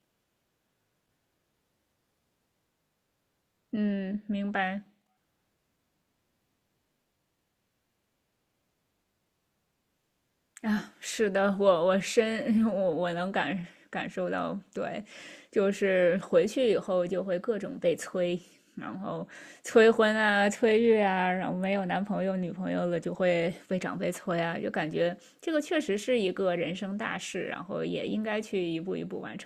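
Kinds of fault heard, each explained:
No technical faults are audible anywhere in this speech recording.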